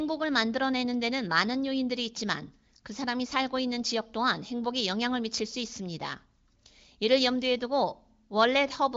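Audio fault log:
No faults detected.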